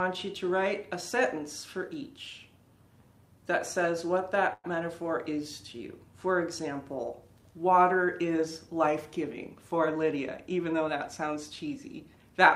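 At 4.53 s a call audio freeze sets in and lasts until 4.66 s. The last sound is stretched into a fading buzz or hiss, then about 30 ms of silence. Packets were likely held up, draining the jitter buffer. Audio resumes where it stopped, now 105 ms late.

From 9.73 s to 11.68 s there is a jitter buffer speed-up. Playback runs at 106% with unchanged pitch, so the sound feels slightly hurried. The receiver is trimming tiny pitch-period slices to shed excess buffered delay, roughly a tenth of a second overall.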